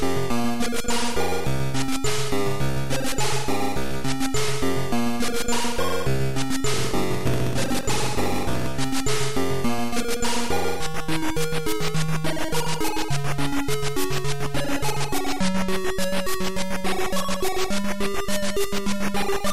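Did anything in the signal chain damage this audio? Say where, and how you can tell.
Yes. Block size mismatch (padded) at the driver or buffer stage, from 6.72 to 8.67 s. A 46.9 Hz buzz appears, and the sound slows to 0.938 times its speed. This fits short blocks zero-padded out to a 1024-sample read, leaving a gap in each block.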